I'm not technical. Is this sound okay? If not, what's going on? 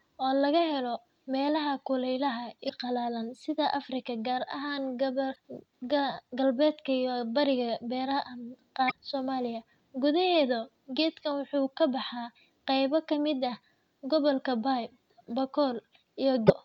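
No. There are four brief glitches from damaged data in a compressed stream. They come at 2.65 to 2.71, 5.32 to 5.37, 8.87 to 8.93 and 16.45 to 16.50 seconds. Each lasts about a twentieth of a second. Small parts of the compressed speech file got spoiled. The player couldn't read those bits, so it lost its place and searched for good data again. You hear a quick chirp or blip.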